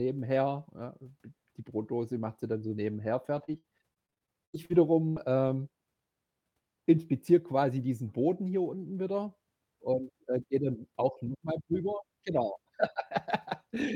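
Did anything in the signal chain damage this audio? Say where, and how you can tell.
Yes. The network stage damaged this speech through repeated packet loss (robotic sound) from 2.91 to 5.50 s. Packets went missing twelve times in that stretch, the longest gap 81 ms, and each hole was patched by stretching the preceding sound, about 420 ms concealed in all, roughly a sixth of the span. You can tell by the choppy texture there: short repeats standing in for lost pieces, arriving in quick succession.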